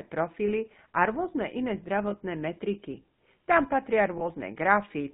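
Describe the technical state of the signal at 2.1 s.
At 2.1 s, just after "a rôzne iné", a lost GSM frames event runs to about 2.15 s. One 20 ms frame went missing, and the decoder filled the gap by repeating the previous good frame's parameters. The result is a brief, rough, metallic ringing in place of the original sound.

This sits on top of the GSM full-rate codec character present throughout. The codec models the vocal tract and drives it with sparse, regularly spaced excitation pulses, which fits its 13 kbps mode. Nothing passes above 4 kHz, and a plainly audible buzzy, gravelly roughness colours the speech.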